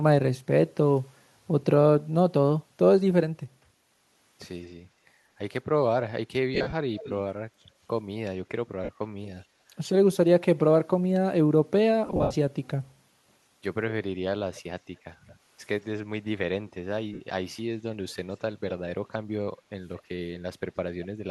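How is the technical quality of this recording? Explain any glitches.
The speech carries two kinds of glitch: brief dropouts where the sound turns to a grainy smear, and faint delayed repeats of the talker. The light breathiness of what is likely a 64 kbps Bluetooth LC3 link can be heard around them.

Lost LE Audio frames occur at 6.54–6.73 s, 8.84–8.89 s, 12.06–12.35 s and 17.14–17.21 s. At each, the speech briefly turns into a noisy, hissy wash before it recovers. The first and third are broken patches: about 130 ms missing over 180 ms, and about 190 ms over 285 ms, with the longest gaps around 40 and 70 ms. The single gaps last 45 ms and about 70 ms. The decoder refills each missing 7.5 ms slot by repeating the last spectrum with scrambled phase, fading it as the gap grows.

An echo leak appears at 6.98–7.14 s, 9.23–9.43 s, 16.68–16.72 s, 18.09–18.14 s, 19.98–20.02 s and 20.36–20.40 s. 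These are repeats of the talker arriving about 210–220 ms late. The first is about 20 dB below the speech, and later ones are fainter, down to roughly 40 dB below. The likely cause is a far end listening on a loudspeaker whose echo canceller let part of the microphone pickup through, sending that copy back down the line.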